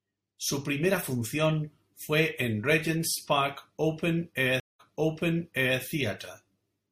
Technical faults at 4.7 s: stream reconnect

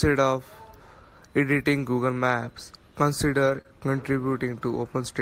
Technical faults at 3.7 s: short concealed packet loss

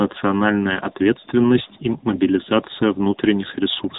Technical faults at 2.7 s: AMR narrowband mobile codec

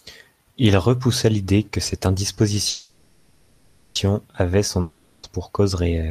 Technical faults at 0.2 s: none

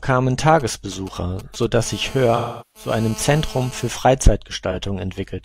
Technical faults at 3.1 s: GSM phone buzz

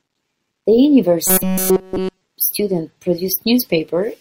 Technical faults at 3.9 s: none

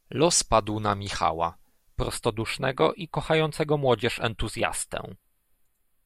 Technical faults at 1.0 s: none

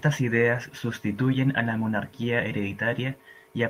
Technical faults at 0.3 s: none

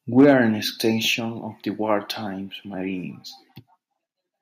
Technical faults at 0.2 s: microphone overload; microphone volume stepped down

